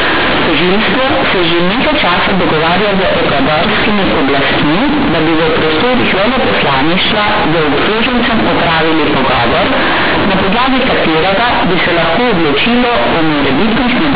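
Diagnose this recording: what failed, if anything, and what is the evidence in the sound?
The failure is companded audio read as linear, at the sample-format conversion stage. The sound is badly wrong for the whole recording. Speech comes out very loud and harshly buzzy. Quiet passages are as large as loud ones, and pauses fill with strong noise. The A-law telephone coding itself sounds intact, band-limited at 8 kHz sampling. The A-law bytes were never expanded. They were played as plain linear 8-bit values. Each sign change then throws the output across about half its range.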